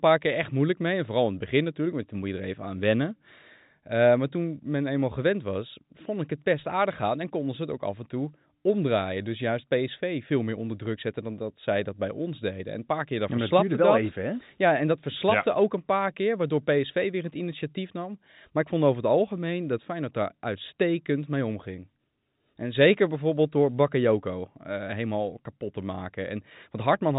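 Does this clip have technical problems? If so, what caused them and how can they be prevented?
No, this clip has no technical problems.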